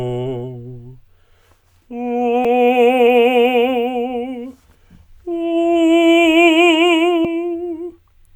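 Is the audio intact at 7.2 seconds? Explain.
No. At 7.25 s the music is broken by a brief glitch. This is damaged data in a compressed stream: part of the encoded file is wrong at that point, so the decoder cannot read the frame properly, loses its place, and searches for the next valid frame header, leaving that short glitch.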